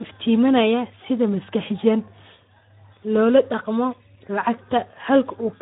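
Speech runs through the Speex codec for the whole clip, and the codec damage is plainly audible: voiced sounds come out hoarse and grainy because too few bits are left to describe the excitation, which fits a low setting around 11 kbps. Nothing reaches above 3.8 kHz. A simple low-pass filter would give the same ceiling with clean voicing, so the roughness is what points to this CELP codec rather than band-limiting alone.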